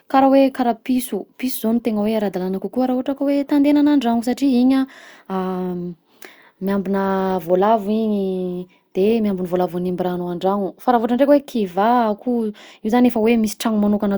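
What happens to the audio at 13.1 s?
Nothing goes wrong at 13.1 s: the speech there plays through intact, with no dropout, click, distortion or other fault to be heard.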